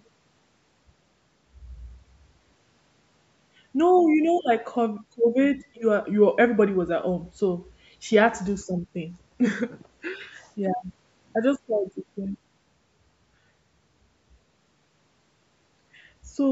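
No technical faults can be heard in this speech, which shows only the ordinary bass trimming of call microphone processing.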